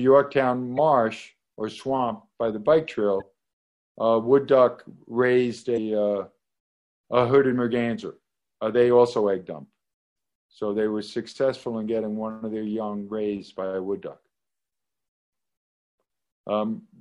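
From the start, the whole clip has a watery, swirling quality, with the top end cut off and smeared transients. This is plainly audible damage, likely from MP3 compression at a low bitrate, consistent with about 64 kbps. With so few bits, the encoder drops the treble above a fixed point and lets weak frequency components switch on and off between frames, which produces the swirl and the metallic edge on bright sounds.

Damaged data in a compressed stream then shows up three times, at 0.75 to 0.79 s, 3.18 to 3.22 s, and 5.74 to 5.78 s. Each event is a brief chirp or blip of about 40 ms. Corrupted bytes make the decoder misread the affected frames and lose sync. It then hunts for the next valid frame header.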